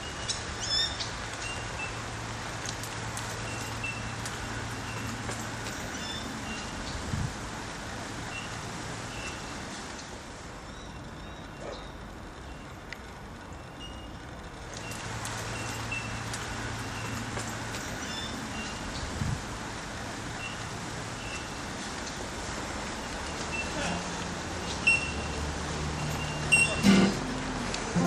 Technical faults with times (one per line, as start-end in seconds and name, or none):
none